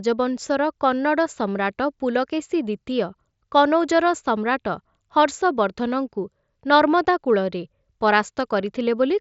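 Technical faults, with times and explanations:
No faults can be heard in this speech recording.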